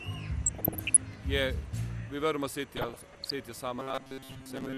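The audio sounds dull throughout, with a gurgling, grainy edge, which is likely MP2 compression at a low rate, around 80 kbps. DAB burbling appears from 0.46 to 1.02 s and again from 2.77 to 3.31 s. Bit errors corrupt single sub-bands, producing short blips of noise. From 3.80 to 4.77 s the sound becomes a rigid metallic buzz at 133 Hz. This robotic sound most likely comes from repeated short buffers of about 7.5 ms, with most of the real audio skipped.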